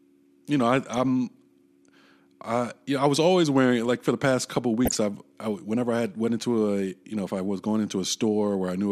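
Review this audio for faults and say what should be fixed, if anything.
DAB burbling sits at 4.85 to 4.96 s, between "for the past couple" and "I've I whenever I". Residual bit errors, around 0.15%, slip past error correction into the MP2 data. Corrupted scale factors make single sub-bands jump in level for up to a frame. Unlike a packet-loss dropout, the sound never goes silent and instead breaks up in narrow bands. Better antenna placement or a stronger multiplex signal would keep bit errors within what the error correction can repair.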